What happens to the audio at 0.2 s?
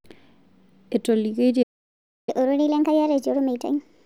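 Nothing goes wrong at 0.2 s; the speech there plays through intact, with no dropout, click or distortion.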